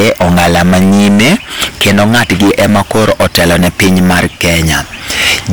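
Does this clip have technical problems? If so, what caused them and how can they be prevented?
Yes. The speech is hard clipped from start to finish. Overdriven by about 22 dB, nearly a third of the samples hit the ceiling and are cut flat, so every loud syllable turns into harsh fuzz. Setting input gain with ample headroom prevents it.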